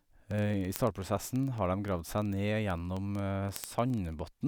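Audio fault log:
0.13–4.46 s, word clock ticks: a steady train of short ticks runs under the speech, about one every 40 ms, so roughly a hundred in all. The receiving device is free-running rather than locked to the source clock, with a rate mismatch on the order of 500 ppm. Each time the two clocks slip a full sample, one sample is dropped or repeated and its neighbours are misread, leaving a brief discontinuity that sounds as a click.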